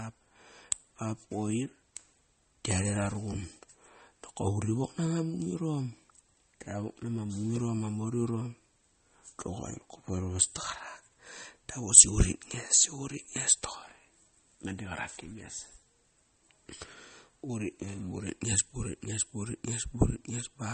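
Speech, with plainly audible MP3 compression running through the whole clip. Nothing is present above about 8.4 kHz, where the encoder has cut the treble to save bits, so the sound is dull and s sounds lose their edge. Weak frequency lines drop in and out from frame to frame, giving a watery, swirly texture and smeared attacks. The damage likely comes from encoding at a low bitrate, which fits roughly 32 kbps.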